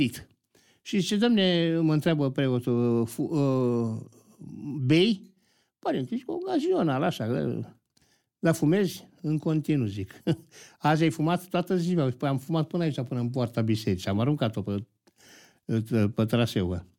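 No technical faults can be heard anywhere in this speech recording.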